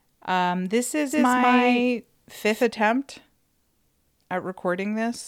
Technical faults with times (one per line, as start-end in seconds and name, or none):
1.11-2.63 doubled audio track